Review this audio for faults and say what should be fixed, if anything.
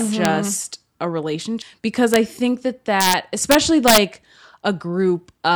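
Integer overflow cracks the loudest speech peaks at 0.25 s, 2.14–2.16 s (just before "think that"), 3.01–3.13 s (right after "think that") and 3.51–3.98 s, exceeding full scale by about 0 to 5 dB. Instead of being limited, the samples wrap to the opposite extreme. On a waveform they appear as vertical full-range jumps, and on a spectrogram as broadband vertical streaks. Fix this by using saturating arithmetic or a limiter before integer conversion.

A CD skip at 1.62 s, just after "just a", produces a tick and a mute of only a few milliseconds. Playback then resumes from a different point on the disc, so the speech jumps discontinuously. On a waveform this shows as a tiny gap with a mismatched edge, and on a spectrogram as a thin vertical line. Fix this with a clean re-rip using error-correcting extraction, and prevent it with shock protection during playback.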